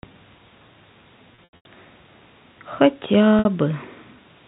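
Packet loss with pitch repetition occurs at 1.35–1.65 s, where 210 ms is lost in bursts of up to 90 ms, and at 3.39–3.45 s, where 60 ms is lost. The repeated pitch periods sound buzzy and held. They appear as frozen harmonic stripes on a spectrogram and as identical, fading cycles in the waveform.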